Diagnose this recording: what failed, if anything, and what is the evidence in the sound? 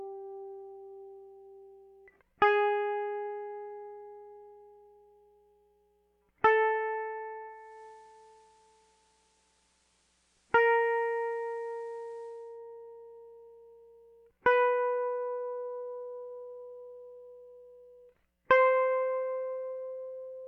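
At the receiver, digital radio blending to analogue FM ran from 7.46 to 12.62 s over 0.4 s cross-fades. The level drops about 1 dB and faint hiss appears.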